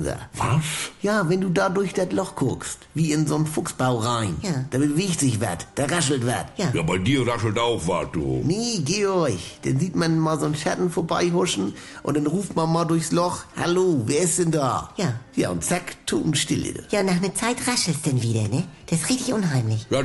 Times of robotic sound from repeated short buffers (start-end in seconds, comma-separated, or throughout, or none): none